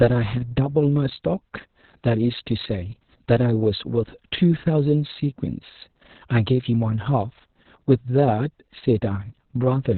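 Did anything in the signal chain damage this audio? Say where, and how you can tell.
Yes. The damage happened at the codec stage: Opus voice compression throughout, with nothing above 4.2 kHz. The heavily muffled, hoarse, slightly robotic speech points to SILK-only narrowband coding near 6 kbps with long 60 ms frames, which quantises the excitation coarsely.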